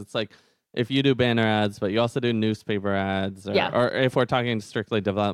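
No technical faults can be heard anywhere in this speech recording, and the signal stays steady and intact throughout.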